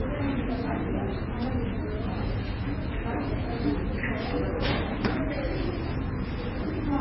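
From start to finish the sound is dull and smeared, with nothing above 5.6 kHz, and two distinct kinds of artefact are layered together, those of each codec in the chain heard at once. This is most likely transcoding between lossy codecs, a very low-rate MP3 re-encoded as Vorbis, the second encoder spending bits on the first one's damage. A spectrogram would show a hard ceiling at 5.6 kHz, with patchy, flickering blocks below it.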